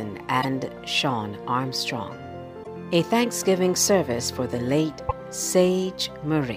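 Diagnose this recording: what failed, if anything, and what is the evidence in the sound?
Damaged data in a compressed stream, at the codec stage: brief chirps or blips at 0.38–0.45 s, 2.60–2.67 s and 5.06–5.13 s, each about 70 ms. The decoder misreads corrupted frames and hunts for the next frame header. Unlike a buffer dropout, the fault lies in the coded data itself, not in playback timing.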